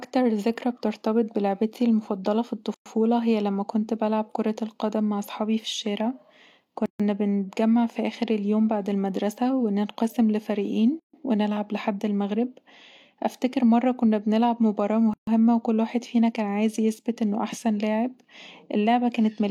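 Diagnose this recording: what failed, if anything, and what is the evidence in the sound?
The codec stage failed, leaving a gap at a join of encoded pieces. Silences of 115 ms at 2.74 s (after "بترتبط بلعبتي المفضلة في") and about 139 ms at 6.86, 11.00 (before "ونلعب لحد") and 15.14 s split the speech at pieces every 4 s. Each separately encoded piece kept its start-up delay and last-frame padding. A network dropout would be irregular and lose audio, but here the speech resumes exactly where it stopped.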